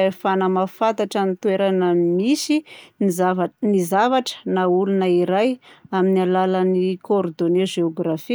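No technical faults are audible.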